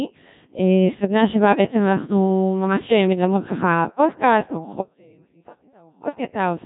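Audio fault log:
Throughout: Codec 2 vocoder. The speech was reduced to pitch, voicing, energy and a spectral envelope at a rate that fits 1.3 kbit/s, then rebuilt from sine waves, so the voice comes out heavily robotic and buzzy, with nothing above 3.8 kHz.
4.81 to 6.05 s: audio dropout to a faint residue. The signal path likely lost its feed for 1.24 s while staying live, so the speech cuts off abruptly and only a faint trace remains, about 30 dB down, before returning just as suddenly.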